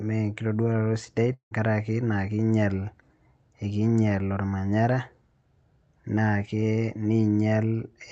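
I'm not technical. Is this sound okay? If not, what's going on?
No. From 1.33 to 1.54 s the speech breaks off. A fading buzz stands in for it, then brief silence, and the speech resumes with a piece missing. This is likely a long network dropout, where the call connection briefly stopped delivering sound.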